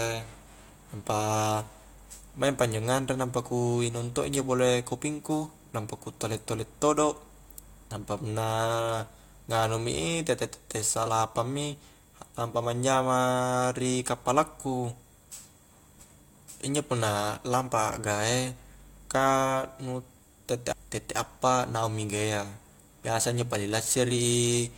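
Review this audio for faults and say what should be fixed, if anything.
At 20.71 s the speech jumps abruptly forward with a brief blip, as if a stretch of the recording has been cut out and the two sides butted together. The likely cause is a stream segment skipped: one chunk of the segmented stream failed to arrive or load, and the player moved straight on to the next one instead of waiting, so the missing audio is simply gone. To prevent it, have the player retry or buffer a failed segment before advancing, and capture from a connection stable enough to deliver every segment.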